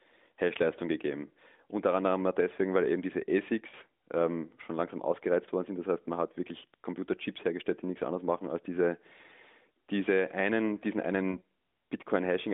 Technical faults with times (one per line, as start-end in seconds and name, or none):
3.70-3.75 lost AMR speech frames
9.28-9.32 lost AMR speech frames
11.32-11.39 lost AMR speech frames